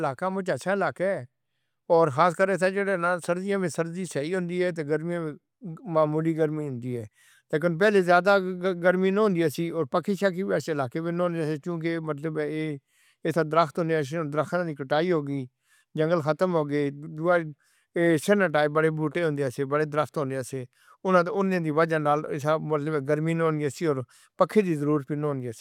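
Speech recording, no technical faults heard.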